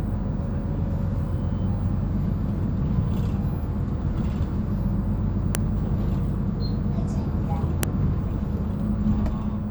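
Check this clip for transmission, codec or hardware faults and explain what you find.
There is one fault here, a file header played as audio. It occurs twice, at 5.55 s and 7.83 s. Each time a sharp, loud click cuts through the sound. It is abrupt and unrelated to what the audio is doing at that moment. Separate WAV pieces were joined without stripping their headers. The header bytes were then read as sample values. They form a brief burst of garbage that bursts out as a snap where each new piece begins.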